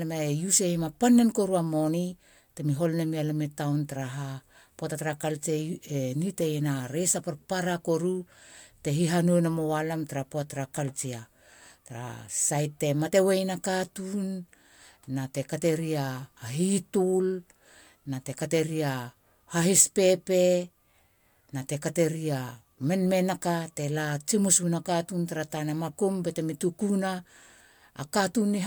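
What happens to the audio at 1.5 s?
Nothing goes wrong at 1.5 s; the speech carries on intact through that moment with no dropout, click or distortion.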